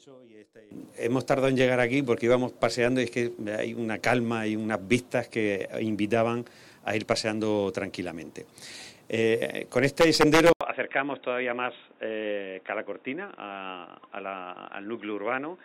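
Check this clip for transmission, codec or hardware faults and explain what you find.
One hardware fault is present. At 10.53 s the sound changes character and stays changed to the end. This is an input switched to a poorer device, likely a move to another microphone or a headset's call profile. A gap of 80 ms marks the switch. After it, nothing is heard above 3.8 kHz, so the audio turns dull and boxy. The level falls by roughly 5 dB. A new background noise appears, only about 30 dB below the signal.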